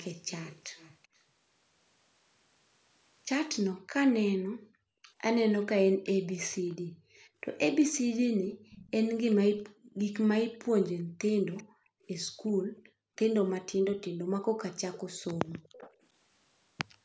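Speech with a faint, delayed second copy trailing the talker by 386 ms, about 25 dB down, at 0.00–1.07 s, 8.70–9.94 s and 11.57–15.94 s, most likely an echo leak from a speakerphone whose echo canceller let its own playback through. The room background also dips sharply, by up to about 37 dB, at 4.43–5.13 s and for about two seconds in all between 6.75 and 15.69 s. This is background gated by the echo canceller, which clamped the microphone while the loudspeaker played.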